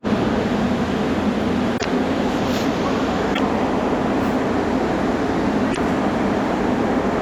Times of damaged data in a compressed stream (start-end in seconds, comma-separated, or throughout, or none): 1.76-1.86, 3.31-3.40, 5.68-5.78